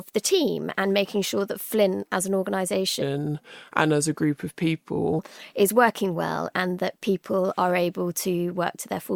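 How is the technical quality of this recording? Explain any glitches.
The recording has one clear glitch. From 3.02 to 5.19 s the speech turns deep and sluggish, dropping about four semitones, as a section at the wrong speed plays back at 0.814 times its recorded rate, likely from being fitted to the wrong clock. Pitch and tempo fall together, then snap back.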